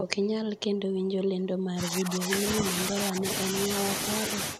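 A faint, delayed copy of the speech surfaces briefly from 0.57 to 0.61 s, sitting far below the direct sound, roughly 30 dB down, and trailing it by about 469 ms. This is an echo leak: the far end was likely playing the call over a loudspeaker, and its echo canceller let a small residue of the returned audio slip through and travel back down the line.

From 1.73 to 2.32 s the speech sinks, losing around 10 dB at its deepest across roughly half a second. A brief, shallower dip of a few dB follows at 2.60 to 2.64 s, then another drop of about 10 dB from 2.91 to 3.25 s, affecting a couple of hundred milliseconds. This is speech suppressed in double talk, likely because the canceller met both ends talking together and attenuated the wanted speech along with the echo.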